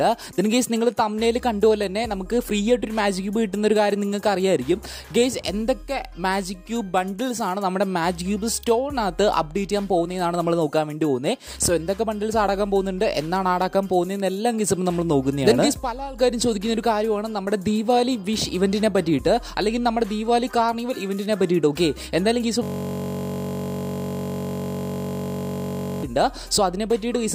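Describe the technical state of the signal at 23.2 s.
At 23.2 s the signal is stuck in a system hang loop, running from 22.63 to 26.03 s. The system froze while the hardware kept replaying one 21.33 ms stretch of its ring buffer, which fits a 1024-sample buffer. That exact repetition at 46.9 Hz fuses into a steady buzz rather than a stutter or skipping-record effect.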